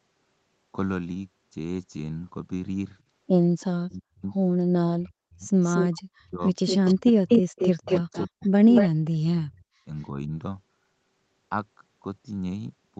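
A speech recording over a call in which the far end's echo canceller likely let loudspeaker pickup through, producing an echo leak: a delayed copy at 3.6 s (333 ms, very faint), then 5.64–5.98 s and 6.67–8.89 s (232 ms, nearly as loud as the speech). Speech suppressed in double talk, likely from the canceller ducking both talkers, cuts the voice by up to roughly 40 dB during 3.71–4.24, 4.83–5.44, 5.98–6.41 and 6.94–10.3 s.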